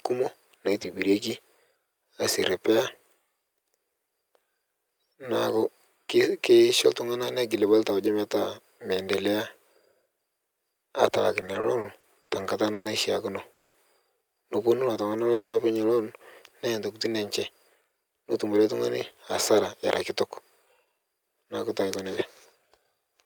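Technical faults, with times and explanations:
11.41–12.87 s, repeated stalls (stutter): eight short holds, longest 120 ms, fill about a fifth of the span as the jitter buffer keeps running dry. The waveform shows repeated smeared, stretched cycles.
13.53–13.76 s, call audio freeze: a 210 ms buzzy continuation of the last sound, likely packets held up and the jitter buffer emptying. The spectrogram shows frozen, repeating bands.
14.85–15.31 s, jitter buffer slow-down: repeated pitch periods add 62 ms, so the sound runs at 88% speed with its pitch unchanged. The spectrogram shows harmonics stretched in time.
15.33–15.56 s, call audio freeze: a 210 ms held buzz fades to 90 ms of silence, then "loon neya ntokitin" resumes. The waveform goes flat before picking up again.
17.81–18.61 s, jitter buffer speed-up: removing about a tenth of a second of pitch periods makes the speech run at 111% speed and sound hurried. 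The spectrogram shows compressed syllables.
20.84–23.24 s, jitter buffer speed-up: after "era kitok" the audio runs at 107% speed, with about a fifth of a second trimmed away. The waveform shows slightly tighter syllable spacing.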